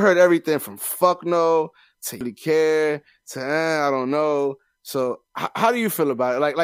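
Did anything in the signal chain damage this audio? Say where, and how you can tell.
Yes. The damage sits at the codec stage, as damaged data in a compressed stream. At 2.21 s the speech is broken by a glitch. Part of the encoded stream was wrong at that point. The decoder could not read those frames correctly and lost sync. It then hunted for the next valid frame header and resumed from there. That produces the artificial glitch in the audio.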